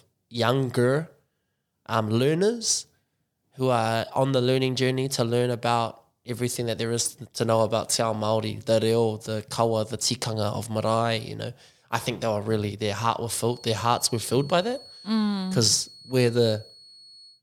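From 13.4 s to the end, a thin feedback whistle near 4.4 kHz sits about 25 dB below the speech, swelling and fading slowly, likely from a loudspeaker-to-microphone loop held just short of runaway.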